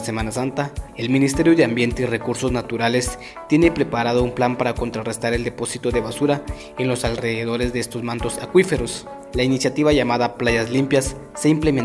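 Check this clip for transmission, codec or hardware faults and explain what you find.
No faults turn up when checking this clip.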